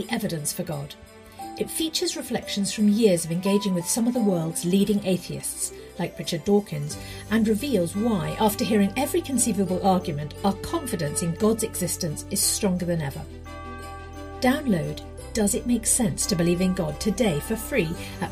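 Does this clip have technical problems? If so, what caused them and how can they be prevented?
No, nothing technical goes wrong here, so there's no cause to track down and nothing to guard against.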